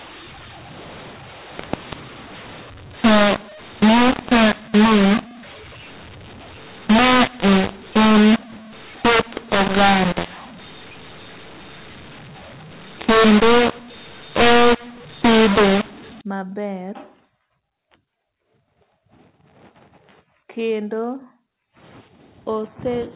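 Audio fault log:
0.00–16.21 s, mu-law and A-law mixed up: telephone speech that was encoded with the A-law curve is being expanded with the mu-law curve, so each 8-bit code maps to the wrong amplitude. Loud and soft samples come out scaled unevenly, giving a harsh, gritty distortion over the speech, and the smallest codes land well above zero, so the gaps between phrases fill with hiss. After 16.21 s the correct A-law decoding returns, leaving plain narrowband telephone sound with nothing above 4 kHz.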